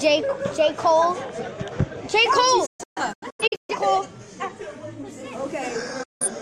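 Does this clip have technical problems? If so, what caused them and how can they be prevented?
Yes. A digital broadcast dropout mutes the sound in scattered short holes from 2.66 to 3.75 s, then again from 6.03 to 6.26 s, as the receiver drops bad frames. Better reception or antenna placement prevents it.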